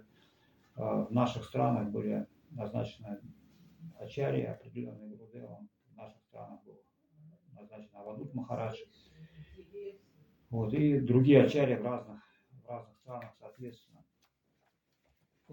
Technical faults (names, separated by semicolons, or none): zipper noise